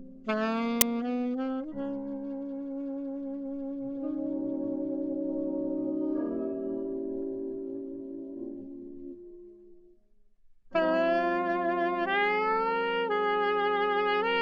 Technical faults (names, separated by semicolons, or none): file tags played as audio